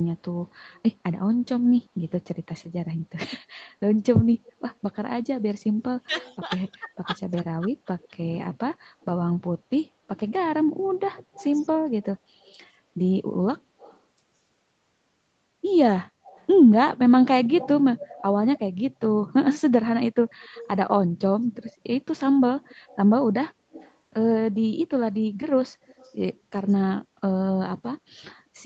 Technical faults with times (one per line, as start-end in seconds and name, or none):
0.71-0.80 echo leak
4.34-4.52 echo leak
5.84-8.16 speech suppressed in double talk
6.15-9.05 echo leak
11.14-14.00 echo leak
16.26-18.59 echo leak
20.29-23.94 echo leak
25.87-26.14 echo leak